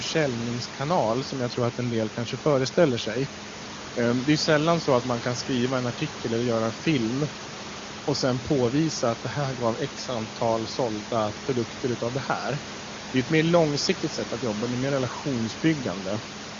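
Nothing in this speech recording points to a technical fault: the room's background noise sits about 14 dB below the speech as part of the recording itself, and the sound carries the bandwidth of AMR wideband (HD Voice) coding, with nothing above 7.3 kHz, at a quality that fits its top rate of 23.85 kbit/s.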